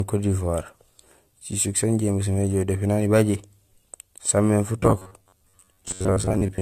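A speech recording, most likely passed through a lossy codec several times over, perhaps three, each pass requantising on a shifted frame grid, so the damage compounds into generation loss. Throughout, the sound is swirly, smeared and hollow, and attacks are blurred, which fits AAC-LC at around 64 kbit/s. From 4.80 s to the end at 6.61 s, fresh audio is likely arriving too slowly, so the playback repeats a buffer of roughly 10.7 ms while about half the real audio is skipped. The result is robotic sound from repeated short buffers, a rigid metallic buzz at 93.8 Hz that still loosely tracks the speech.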